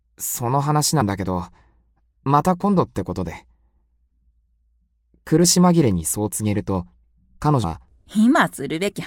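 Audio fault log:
1.00 s, 5.43 s, 7.63 s: compressed frames skipped. The sound jumps forward each time, by roughly 70 ms at 1.00 s, only a few milliseconds at 5.43 s, and around 150 ms at 7.63 s, which points to several whole frames dropped at the first, a couple at the second, and a longer run at the last.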